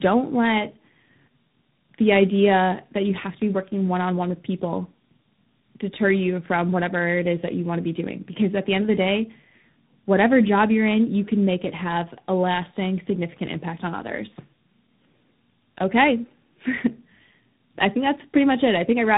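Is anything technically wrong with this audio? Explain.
Yes. Tandem speech coding runs throughout: the speech passed through two speech codecs in a row, most likely a low-rate mobile coder around 7.4 kbit/s and then 32 kbit/s ADPCM, each re-encoding the other's already damaged output. The result sounds rough, muffled and warbly, with nothing above 3.8 kHz.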